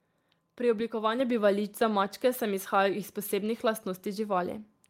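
At 1.2 s the microphone volume is stepped up: the input gain jumps by about 4 dB in one step, so the speech and the background noise get louder together and stay there. A compressor would shift the level gradually, following the speech, rather than in one step.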